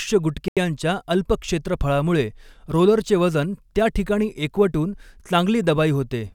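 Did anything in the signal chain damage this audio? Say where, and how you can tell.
Yes, there's a clean dropout right near the start of this speech. From about 0.48 to 0.57 s the audio cuts to dead silence for roughly 85 ms, then resumes just before "अल्प क्षेत्रफळामुळे रोलरचे वजन". There's no fade or smearing at the edges; it simply stops and picks back up. That's most likely a Bluetooth stall on the playback link: interference delayed packets, the headphone buffer ran empty, and output paused until the retransmitted audio arrived.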